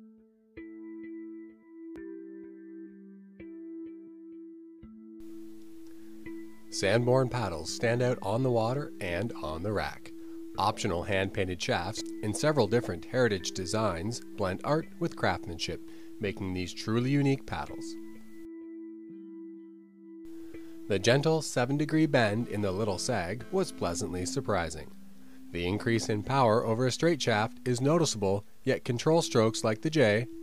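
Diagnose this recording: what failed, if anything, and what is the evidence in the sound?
The analogue wiring picked up GSM phone buzz from a 2G handset close to the gear. From 22.41 to 23.97 s there's a harsh, raspy buzz sitting about 21 dB under the sound, pulsing at roughly 217 Hz with a stack of harmonics and no relation to the audio. Some analogue stage in the chain is rectifying the phone's radio bursts into the signal. It's a short patch rather than a steady drone, which points to the phone doing a data transfer.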